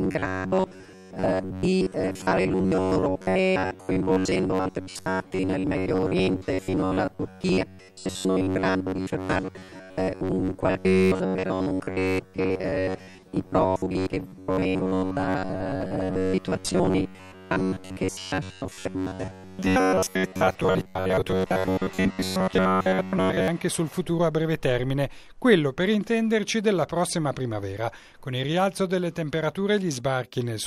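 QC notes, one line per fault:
0.01–23.48 s, robotic sound from repeated short buffers: a rigid metallic buzz at 93.8 Hz is locked onto the sound, likely because audio arrived too seldom and fragments of about 11 ms were replayed in its place, skipping most of the real signal.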